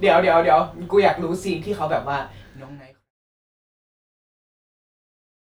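No technical faults can be heard in this speech clip. Near the end the level eases down in a smooth fade-out, beginning at around 2 s and finishing at 3.1 s, with no click or hard edge.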